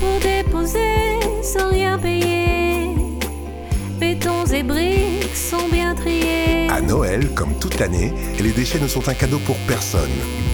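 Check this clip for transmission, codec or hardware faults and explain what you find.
There's one hardware fault here, and it runs through the whole clip: computer activity noise. Underneath the sound sits a buzzy, chirping layer pulsing at around 150 Hz, roughly 20 dB below the signal. It's coming from the machine itself. As the processor, graphics card or mouse change load, the current shifts the ground the audio circuit shares with them, and that wobble rides into the signal. That's why it tracks the computer's activity, not the audio.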